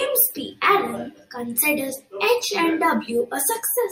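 One channel of this speech clip arrives around 10 ms late and the two are summed to mono, a channel delay that causes comb filtering throughout. Shared content cancels at evenly spaced notches from about 50 Hz upward, leaving the speech hollow and phasey.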